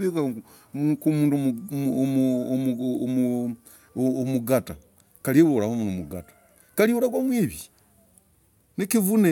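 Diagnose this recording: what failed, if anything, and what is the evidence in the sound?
Nothing failed here as far as I can hear; the speech runs along with no break, glitch or damage anywhere in the chain.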